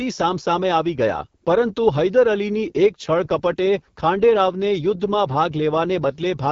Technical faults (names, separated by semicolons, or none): AMR wideband (HD Voice) codec